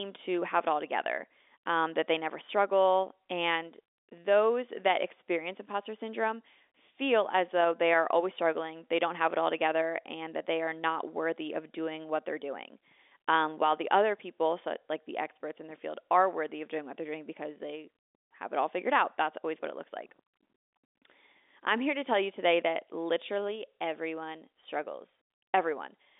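Speech carried over G.711 mu-law telephone coding at 64 kbps, confined to the 300 Hz to 3.6 kHz line band with nothing above 4 kHz, and no technical faults present.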